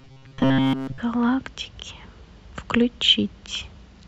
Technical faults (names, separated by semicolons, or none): robotic sound from repeated short buffers